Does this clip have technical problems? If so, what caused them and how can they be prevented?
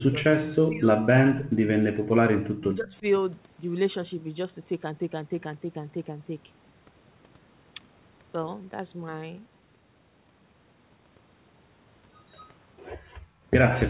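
Yes. Speech suppressed in double talk at 0.06–1.68 s and 2.58–3.04 s: the speech drops by up to about 25 dB, then about 15 dB. The likely cause is the echo canceller ducking everything while both sides talked. Better echo cancellation or a headset instead of the loudspeaker on this end would prevent it.

Background gated by the echo canceller at 12.98–13.46 s: the room sound drops by about 20 dB while the loudspeaker plays. Gentler suppression settings or comfort-noise fill would prevent it.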